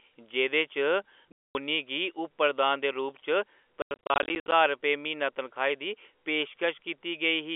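At 1.32 s the speech cuts out completely until 1.55 s, a 230 ms hole with hard edges. That's packet loss filled with silence: packets never arrived and the receiver played nothing in their place. From 3.82 to 4.52 s it happens again, this time scattered: about 380 ms goes missing across 700 ms, with the longest single gap at 90 ms, so the sound stutters. Those gap sizes fit 10 ms packets, all over the narrow 300 to 3400 Hz telephone band of the G.711 coding.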